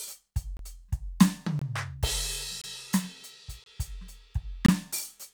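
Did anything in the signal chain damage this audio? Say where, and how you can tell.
Yes, a gap between chunks at the playback or streaming stage. The music stops for about 23 ms at 0.57, 1.59, 2.62, 3.64 and 4.66 s, every 1.0 s. Unlike dropouts, nothing is lost, and the music resumes exactly where it stopped.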